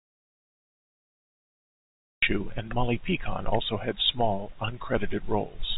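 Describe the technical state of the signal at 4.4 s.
At 4.4 s the audio is intact, with no fault, and carries the band-limited sound of G.711 telephone coding, nothing above about 3.8 kHz.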